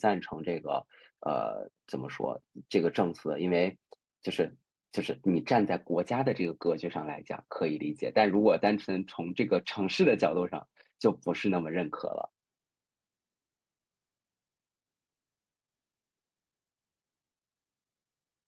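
No faults found in the speech; it has passed through a normal call path whose codec limits the audio to roughly 12 kHz, consistent with Opus at a moderate bitrate.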